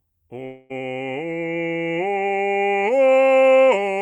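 From 0.45 to 0.72 s the music stops moving forward. The last sound smears into a fading buzz or hiss for 242 ms, never dropping to silence, and the music resumes with 240 ms skipped. This is likely a long network dropout, with the receiver filling the gap.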